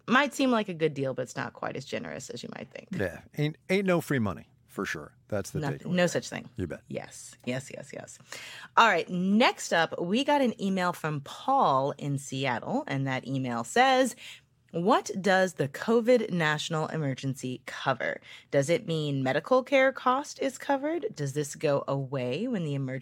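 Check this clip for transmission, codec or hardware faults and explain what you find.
No transmission, codec or hardware faults turn up anywhere in this speech clip.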